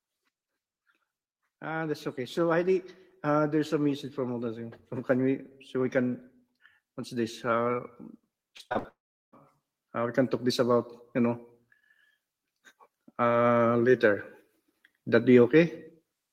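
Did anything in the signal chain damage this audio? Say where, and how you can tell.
Yes. From 1.61 to 6.04 s, call processing applied automatic gain rising: the gain control judged the input too quiet and lifted its gain gradually by about 8 dB over more than four seconds. The giveaway is that the background noise floor climbs along with the speech. A talker simply raising their voice would not lift the room noise, and a fader move would not have this slow ramp.

From 8.57 to 8.86 s the network stage shows repeated packet loss, producing robotic sound. There are five short holes, the longest about 58 ms, and roughly half of that stretch is patched by extending the previous sound. The patches give a choppy texture with fragments of speech missing. Codec artefacts smear the sound continuously rather than chopping it, so the rapid on-off gaps point to lost or late packets.

Immediately afterwards, from 8.88 to 9.34 s, there is a long network dropout. 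The last sound is stretched into a fading buzz, then about 0.37 s of near-silence follows, and the speech resumes further along with that portion gone. The likely cause is audio that never arrived at the receiver. A natural pause would not begin with that decaying concealment buzz, and it would not skip ahead in the speech.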